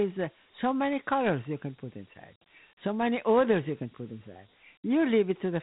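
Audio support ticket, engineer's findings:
Gritty hiss riding on the speech throughout, band dead above 3.9 kHz, plainly audible codec damage. Dialogic VOX ADPCM: coarse 4-bit steps with 12-bit precision, band limit fitting 8,000 samples a second, roughly a 32 kbps stream.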